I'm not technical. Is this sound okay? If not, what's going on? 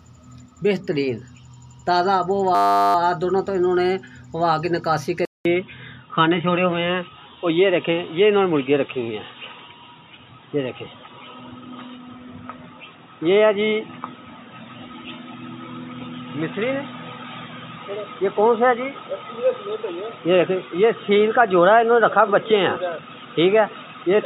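No. From 2.55 to 2.95 s there's a system hang loop: the computer briefly froze while the sound hardware kept replaying the same tiny 10 ms scrap of audio, about 40 times over. That's why you hear a flat buzz there, humming at 100 times a second.

Then at 5.25 s the audio drops out for a fifth of a second and comes back duller and boxier, with nothing above 3.8 kHz, a bit of new background hiss and a slight change in loudness. That's likely the input switched to a poorer device, such as a different microphone or a headset, and it stays that way to the end.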